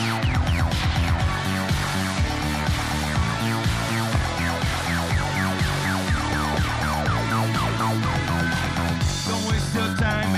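At 4.15 to 4.18 s a loud pop lands on top of the audio, a single sharp burst about 10 dB above the surrounding sound, and at 6.33 to 6.56 s a second event brings two pops in quick succession at a similar level. The likely cause is a sudden voltage step from a plug, switch, static or driver glitch, shaped by the following circuitry. Unlike a dropout, the sound continues underneath without any gap.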